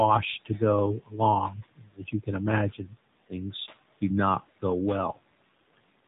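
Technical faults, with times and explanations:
Throughout, noise suppressor artifacts: the suppressor pulls down every band it judges to be steady noise, frame by frame, by about 17 dB. The room noise, sitting about 19 dB under the speech, drops away between words and swells beneath them.
Throughout, AMR narrowband mobile codec: the speech passes through the AMR-NB mobile codec at a low rate, plainly audible, which fits its 7.4 kbps mode. Nothing above 3.8 kHz survives, so the voice sounds boxed-in and buzzy, with a synthetic edge from the coarse pulse model.
1.0–1.19 s, 1.77–2.28 s and 2.71–2.95 s, speech cut by the noise suppressor: the suppressor mistakes parts of the speech for noise and turns them down by up to about 18, 19 and 13 dB, roughly 0.15 to 0.3 s each time. Parts of the speech sound swallowed or faint, the last just before "things do not go".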